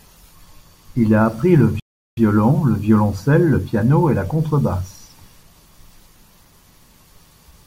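A speech recording with one playback stall. At 1.80 s the audio cuts out in mid-flow. Silence holds for about 373 ms, until 2.17 s. Then the sound resumes. The gap is not a natural pause. It is a dead drop to silence, too long to miss. The likely cause is the player running short of buffered data, or its audio thread being blocked, so nothing reached the output until it caught up.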